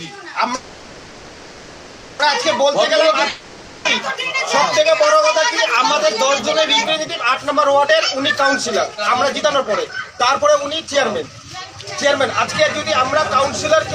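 From 0.55 to 2.21 s there is a call audio freeze. The last sound is stretched into a fading buzz for about 1.6 s. The likely cause is delayed packets draining the jitter buffer. When playback resumes it continues from the same point, so nothing is lost and the delay grows by 1.64 s.

A long network dropout runs from 3.29 to 3.87 s. The sound again decays into a fading buzz. When the audio returns, 0.56 s is missing, which points to packets that were likely lost in transit and never recovered.

From 8.88 to 13.19 s, a jitter buffer speed-up drains a backlog. The receiver trims small pitch-period pieces over and over, removing about a fifth of a second. The audio runs at 105% speed with pitch unchanged and sounds hurried.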